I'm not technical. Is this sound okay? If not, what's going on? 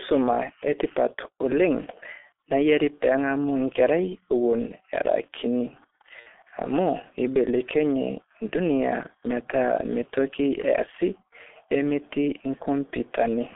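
No, there are two problems with it.

The whole clip has been squeezed through the G.723.1 codec, an old internet-phone format that shrinks speech down to a tiny amount of data. To do that it throws away everything above roughly 3.5 kHz and very low bass too, and it only updates its picture of the voice in coarse chunks. That's why the speech sounds muffled, a bit hoarse and phone-like, with consonants smeared and hard to pick out.

Then, from about 6.20 to 6.28 s, there's VoIP packet loss concealed by the speech codec. Around 60 ms of the call went missing in transit, and rather than leave a hole, the decoder guessed by stretching out the last bit of voice it had while fading it down. So you hear a short buzzy or smeared blip there instead of real speech, and the voice sounds weak and off for a moment afterwards while the codec catches up.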